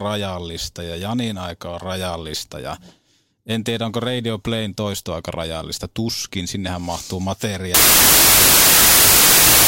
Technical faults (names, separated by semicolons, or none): wrong sample width